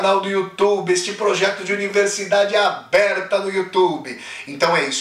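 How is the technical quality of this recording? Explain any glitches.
The recording has hard clipping throughout. It is driven about 5 dB past what one stage could pass, so the loudest peaks, a small fraction well under one percent, are sliced flat. Those flat tops throw harmonics high up, heard as brief crackle on peaks rather than the rounded warmth of soft saturation.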